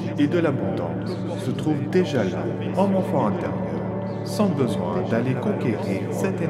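No technical faults can be heard anywhere in the recording.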